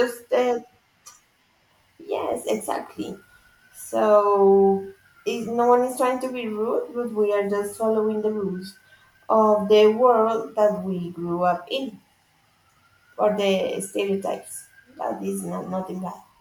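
No technical faults occur anywhere in the speech, so there are none to describe in time order.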